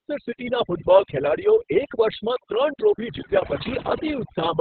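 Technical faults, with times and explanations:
Throughout, overdone noise removal. Bands near the noise level are pushed almost silent, taking quiet speech with them. The background twinkles.
Throughout, Opus voice compression. Nothing survives above 4.4 kHz, which muffles the speech. Heavy, coarse coding adds hoarse, robotic roughness, fitting a setting near 6 kb/s.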